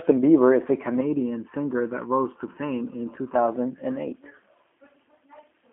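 From start to end the speech carries G.729 codec damage, plainly audible: rebuilt at 8 kbit/s from a tract filter and sparse pulses, it sounds rough and synthetic, nothing above about 3.6 kHz.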